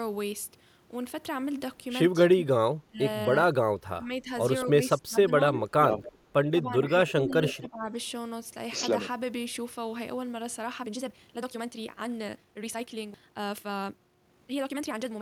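From 2.29 to 5.89 s the speech gets pulled down in patches, about one and a half seconds in total, dipping by around 20 dB at its deepest. That's speech suppressed in double talk: an echo canceller likely heard both ends talking at once, couldn't tell this talker apart from its own loudspeaker echo, and turned everything down. The result is speech that sags and drops out in pieces.

Inside that stretch, at 4.61 to 4.65 s, there's a tiny echo leak. A faint copy of the speech comes back 247 ms late, roughly 25 dB under the talker. The cause is likely an echo canceller on a loudspeaker end that didn't fully scrub what its mic picked up. It shows up again at 6.04 to 6.18 s, this time 275 ms behind and about 20 dB down.

Double-talk suppression returns from 6.62 to 7.94 s, cutting roughly a second's worth of speech by up to about 15 dB. Overlapping it, from 7.08 to 7.68 s, the longest echo leak arrives, again 275 ms late and only about 15 dB below the speech.

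From 10.76 s to the end, the pace suddenly jumps to 1.83 times speed while the pitch stays put. That's a time-stretched section, likely squeezed by software that drops short slices to fit a length. It sounds rushed.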